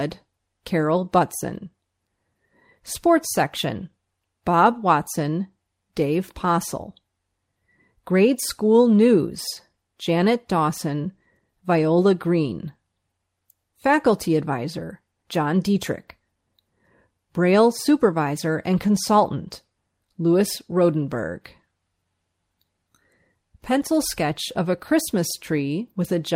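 No audible faults anywhere in the recording.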